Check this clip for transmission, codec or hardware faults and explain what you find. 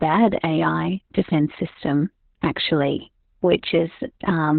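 One codec fault runs through the whole clip. Opus voice compression, throughout: the SILK speech coder has cut the band to narrowband, so nothing survives above 4.4 kHz, and coarse excitation coding, consistent with a bitrate around 8 kbps, leaves the speech heavily muffled, hoarse and slightly robotic.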